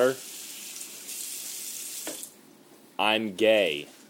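Nothing stood out on listening to this recording of sounds.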